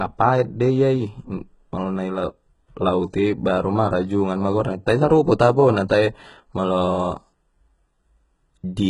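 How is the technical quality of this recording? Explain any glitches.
The recording has one fault throughout: heavy compression, likely HE-AAC compression. The treble is rebuilt by copying lower bands upward, so s sounds turn gritty and metallic. Nothing sounds above 11.1 kHz, which points to a very low bitrate near 12 kbps.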